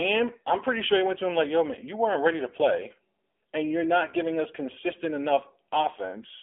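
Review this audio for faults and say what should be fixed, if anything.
AMR narrowband mobile codec damage runs the whole way through: nothing above about 3.7 kHz, a thin 250 Hz to 3.5 kHz phone band, and a buzzy, synthetic edge on the speech that fits a low rate around 7.4 kbps. To prevent it, capture or route the call over a wideband path instead of narrowband mobile.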